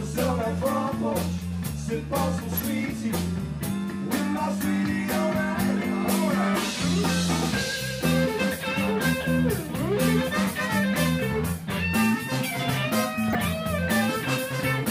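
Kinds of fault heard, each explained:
DAB burbling: brief burbling noise blips flare over the sound at 0.29, 2.56, 9.74 and 13.24 s, each under an eighth of a second. Weak reception let stray bit errors past error correction, corrupting the MP2 audio data so short noise blips appear in single sub-bands.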